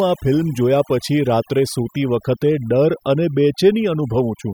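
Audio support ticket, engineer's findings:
Overdone noise removal, throughout the speech. Background drops and breaks up, with twinkling specks left behind. Noise reduction set too strong: bands near the noise estimate gated hard, quieter voice detail removed with them.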